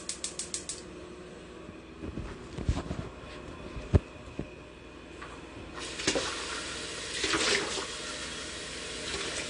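From start to finish the sound is dull, with nothing above 10 kHz, and carries a plainly audible warbling, fizzy smear. This is likely AAC compression at a low bitrate, around 32 kbps. A simple low-pass filter would leave the remaining band clean, without that swirling texture.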